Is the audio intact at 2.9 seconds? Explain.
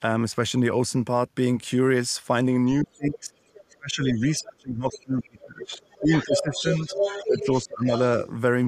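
No. From 2.82 to 3.33 s the speech is suppressed in double talk. The level dips by roughly 25 dB for about half a second. This likely happened because the echo canceller heard loudspeaker sound and near speech at once. It could not tell them apart, so it turned both down.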